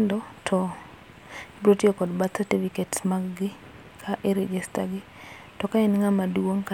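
No technical faults are audible anywhere in the recording.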